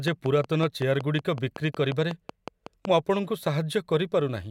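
A train of clicks runs from 0.08 s to 2.86 s in this speech recording: about fifteen short, similar pulses at a steady 5.4 per second, standing roughly 10 dB above the speech and audible in the gaps too. A regular tick like this, added on top of the signal rather than cutting into it, is likely interference from nearby equipment or a faulty connection or power supply injecting a repeating spike into the path.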